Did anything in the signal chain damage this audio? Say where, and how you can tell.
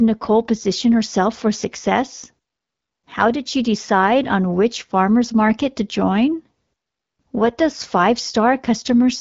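No, nothing in the chain has damaged this speech. It carries the light coding texture of the AMR wideband (HD Voice) codec, with nothing above 7.5 kHz, which fits its 12.65 kbit/s mode.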